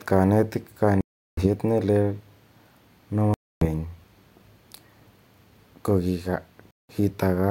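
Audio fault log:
1.01–1.47 s, 3.34–3.65 s, 6.71–6.92 s: Bluetooth dropout. The speech cuts to abrupt silence three times and resumes further along, likely from packets reaching the headphones too late and being discarded.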